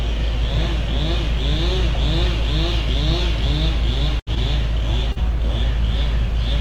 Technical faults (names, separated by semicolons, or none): burst of packet loss; short concealed packet loss